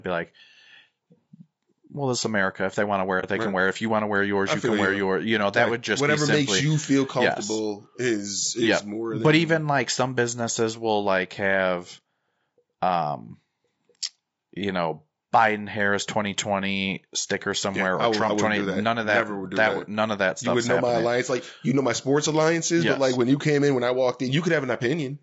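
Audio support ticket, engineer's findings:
Rough, grainy speech throughout, with noise between the harmonics and a thin, synthetic top end. Likely low-delay AAC compression (AAC-ELD) run at a low bitrate, around 32 kbps.

Soft-edged dropout, 3.20 to 3.24 s, between "they want to wear" and "it they right can". AAC frame loss with muting; the decoder zeroed the spectrum. Fits a single lost frame of about 30 ms.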